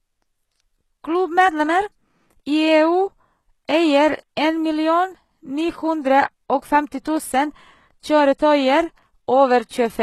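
Throughout the speech, the s sounds come out gritty and lispy, and the treble has a bright but synthetic sheen that stops dead around 12.3 kHz. This is likely HE-AAC compression at a very low bitrate, around 16 kbps, rebuilding the top band from copied lower harmonics.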